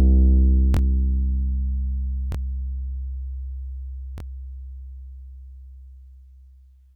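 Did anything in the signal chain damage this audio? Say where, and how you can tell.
Yes. The damage is at the driver or buffer stage: a repeated buffer occurs three times. A slice of about 23 ms plays twice more from 0.74 to 0.79 s, once more from 2.32 to 2.35 s, and twice more from 4.18 to 4.23 s. Each is heard as a brief stutter with a hard join. Fresh audio missed its deadline, so the device replayed its last block, which fits a 1024-sample buffer. Roughly 50 ms or 20 ms of real sound goes missing each time. On a waveform the identical segments sit back to back with a discontinuity at each seam. A spectrogram shows thin vertical broadband lines at those joins.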